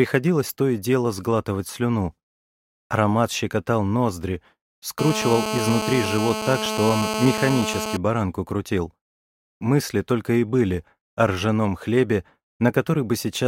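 From 4.99 to 7.97 s a GSM phone buzz sits on the audio: a hard, raspy tone at about 217 Hz with a dense harmonic series, about 5 dB below the signal and nearly steady. A nearby 2G phone on a call is pulsing its transmitter, and the audio circuitry rectifies those bursts.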